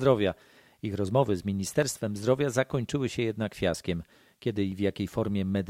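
At 1.82, 2.71 and 4.72 s the speech carries a single sharp click, each most likely from dropped samples. A fraction of a millisecond goes missing, so the waveform jumps abruptly to a later value, leaving a thin vertical line across the spectrogram.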